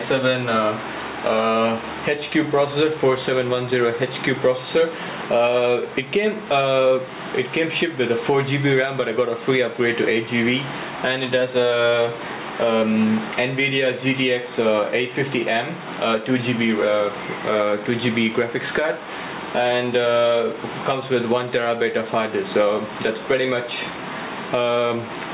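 Gain pumping runs throughout: the gain swings by around 15 dB, ducking under each loud sound, squashing loud and soft parts together. The likely cause is a fast limiter fighting gain set far too high. A waveform shows a flattened envelope, and a spectrogram shows the level rising and falling beneath the call codec's ceiling near 4 kHz.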